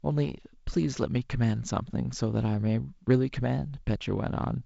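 There are no technical faults to describe in this speech clip, which comes through G.722 wideband telephone coding with nothing above about 7.7 kHz.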